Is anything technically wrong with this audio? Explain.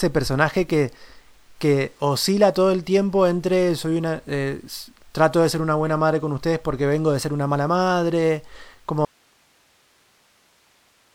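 Yes. From 9.05 s to the end there is an audio dropout to a faint residue: the speech cuts off abruptly, leaving only hiss roughly 40 dB below the signal, likely from the source dropping while the downstream path stayed live.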